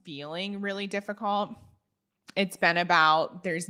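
From about 0.05 s to 1.6 s the speech and the room noise behind it swell upward together, climbing by about 7 dB over roughly a second and a half before levelling off. This is automatic gain rising: the automatic gain control judged the incoming signal too quiet and raised its gain step by step, and because it amplifies everything it receives, the background lifts in lockstep with the voice rather than the voice alone getting louder.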